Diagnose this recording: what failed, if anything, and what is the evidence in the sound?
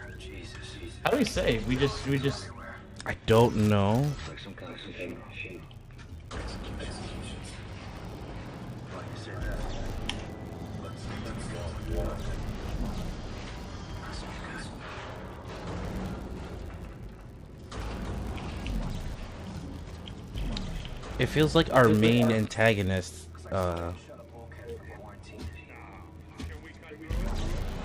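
A filter restarted on every block, somewhere in the block-based processing stage, runs through the whole recording. A buzz at 100 Hz rides on the audio and grows and shrinks with its level, which fits a 10 ms processing block. Each block starts its filter from silence and leaves a small transient. On a waveform these show as tiny spikes every 10 ms. A spectrogram shows faint vertical striations and a comb of harmonics at multiples of 100 Hz.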